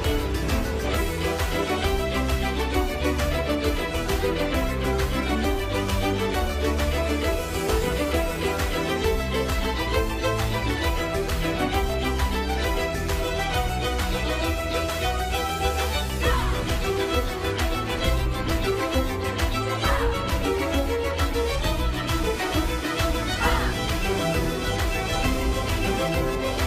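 The audio carries computer activity noise from 21.34 s to the end at 26.66 s: a buzzing, chirping layer pulsing at around 500 Hz, roughly 15 dB below the programme. It follows processor, graphics or mouse load disturbing the shared ground of the audio circuit, not the sound itself.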